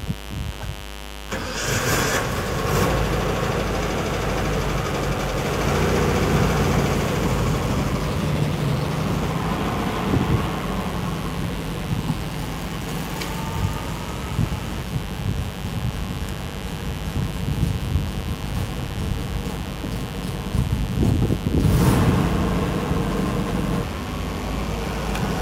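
From start to finish, a mains buzz rides under the audio. Something in the chain, such as a dimmer, a rectifier or an unshielded cable, is letting sharp switching spikes from the 50 Hz supply into the signal, two per mains cycle. Those spikes carry a dense stack of 50 Hz harmonics reaching into the kilohertz range, so the result is a steady, raspy buzz. It is a prominent one, sitting only around 10 dB below the wanted sound.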